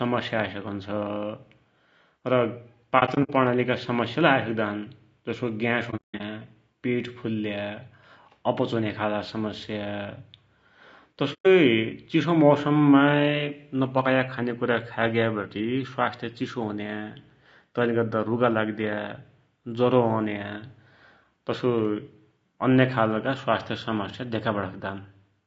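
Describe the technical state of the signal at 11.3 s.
Decoder frames went missing from 11.33 to 11.47 s and their spectrum was zeroed, an AAC frame loss with muting consistent with about four lost frames. The sound fades to a soft-edged silence. Around this spot the audio also has a rough, grainy texture with noise between harmonics, likely from low-delay AAC compression at a rate around 32 kbps.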